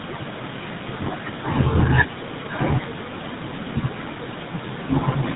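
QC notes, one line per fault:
throughout, GSM full-rate codec: the speech has a plainly audible buzzy, gravelly roughness, and nothing comes through above 4 kHz, which fits the 13 kbps full-rate coder. It rebuilds the voice from a vocal-tract model fed by evenly spaced excitation pulses, keeping only every third excitation sample, so the fine texture between pulses is lost and replaced with a grainy rasp. The call's microphone processing only takes out the lowest bass, so that ceiling is set by the codec.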